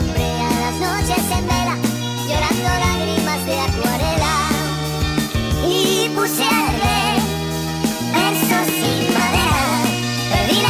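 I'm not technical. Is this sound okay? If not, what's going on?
No. This is a wrong sample rate fault, and it lasts the whole clip. The audio is being played back faster than it was captured, with nothing adjusting for the difference. The speed-up is about 1.45 times, which fits sound recorded at 22 kHz and played at 32 kHz. Because speed and pitch are tied together, everything runs rushed and sits about 6.45 semitones higher, roughly half an octave.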